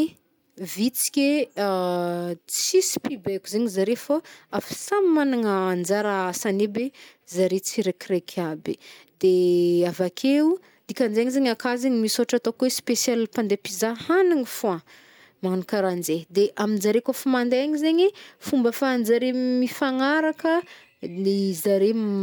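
No technical faults can be heard anywhere in this speech recording, with no breaks, distortion or glitches at any point.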